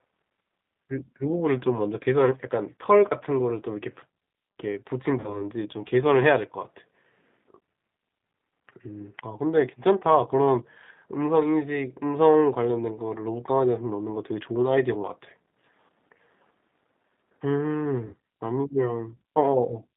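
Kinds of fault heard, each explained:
G.729 codec: Throughout the speech, the codec's damage is plainly audible. The band is confined to about 150 Hz to 3.7 kHz, and the voice has a rough, slightly synthetic edge. This fits an 8 kbit/s G.729A coder. Each short frame is rebuilt from a vocal tract filter, a pitch predictor and a handful of pulses, so fine detail in the original waveform is replaced by a coarse model of it.
VoIP packet loss concealed by the speech codec: This happens at 5.20–5.42 s and again at 18.07–18.14 s. About 40 ms and then about 60 ms of audio went missing, which points to two and three lost packets. Each time, the decoder stretches its last pitch and filter into a buzzy tone or coloured noise that fades. Because each frame depends on the previous one, the speech stays weakened and smeared past the gap itself.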